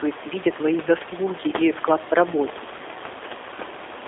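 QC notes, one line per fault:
Throughout: G.729 codec. Speech is confined to 300 Hz to 3.6 kHz and rebuilt from a vocal tract model, pitch prediction and sparse pulses, so it sounds plainly rough and synthetic, fitting an 8 kbit/s G.729A stream; room noise, about 17 dB down, warbles.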